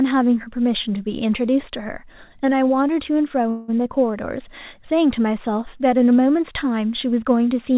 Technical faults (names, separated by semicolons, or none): call audio freeze